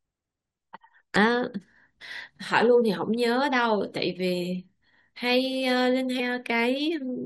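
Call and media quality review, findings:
Short glitches in the speech at 1.15 s and 6.19 s. Damaged data in the compressed stream: decoder loses frame sync, resyncs at next header.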